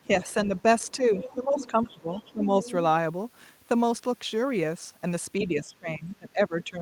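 Right at the start, from 0.07 to 0.5 s, the speech dips briefly, only by about 5 dB and for well under a tenth of a second in total. That's speech suppressed in double talk, likely because the echo canceller couldn't tell the local talker apart from loudspeaker echo while both sides were active, so it pulled everything down together.

From 0.45 to 2.71 s there's the other side's voice leaking through, sitting around 15 dB under the main speech. It's the sort of residue you'd get when the canceller likely failed to strip all of the far end out of the microphone signal while it played on the loudspeaker.

During that stretch, from 0.97 to 2.65 s, the talker gets ducked again, harder this time, dropping by about 10 dB and for roughly a second in total, as the canceller likely fights both voices at once. The last and deepest dip runs from 5.4 s to the end at 6.82 s, with the speech pulled down by about 20 dB.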